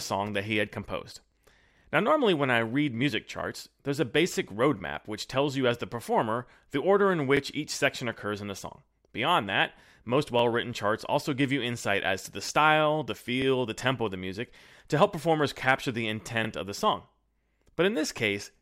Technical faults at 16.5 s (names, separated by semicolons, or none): overlapping chunks